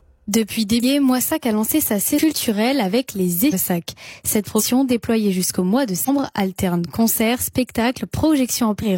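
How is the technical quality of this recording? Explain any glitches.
The recording is marred by repeated compressed frames skipped, at 0.79, 2.14, 3.49, 4.55, 6.04 and 8.78 s. Whole compressed frames go missing or are rejected, so the audio jumps ahead, mostly by about 0.3 s, though by about 0.4 s at 0.79 s and about 0.7 s at 3.49 s. These jumps fit multiples of a frame of roughly 46 ms. A spectrogram shows abrupt content discontinuities.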